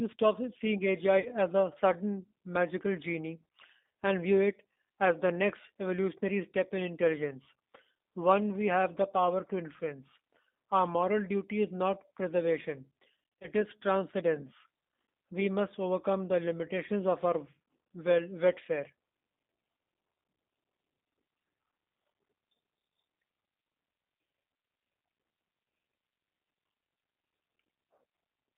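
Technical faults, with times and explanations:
Throughout: G.729 codec. The signal is squeezed through a low-rate CELP coder that rebuilds it from a filter, pitch predictor and a few pulses, which fits an 8 kbit/s G.729A stream. The sound is confined to about 200 Hz to 3.7 kHz and has a plainly rough, synthetic texture.
1.20–1.32 s and 13.40–13.48 s: VoIP packet loss concealed by the speech codec. Packets went missing, so the decoder extrapolated from its last pitch and filter with falling gain. Sound at 1.2 s smears into a fading buzzy tone or coloured noise over about 50 ms. At 13.4 s, losses totalling about 110 ms are scattered across roughly 180 ms, in runs of up to 30 ms, and cause repeated brief distortion.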